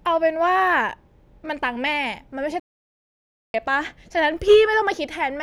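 At 2.60 s the speech cuts out mid-flow and the output falls completely silent for about 0.94 s, picking up again at 3.54 s. The gap lands abruptly rather than fading, so it reads as a dropout rather than a natural pause. This is a playback stall: the player most likely ran dry of buffered data, or its audio thread was held up, and nothing reached the output until it caught up.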